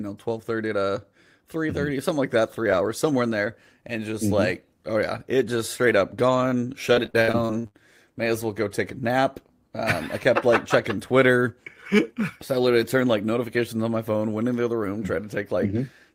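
Right after "just straight up gone", from 6.93 to 7.76 s, repeated packet loss (robotic sound) sets in: eight gaps, the longest 77 ms, each patched by extending the previous sound, together about 40% of the span. It sounds choppy, with pieces missing. A spectrogram shows smeared, repeated harmonic blocks with hard edges.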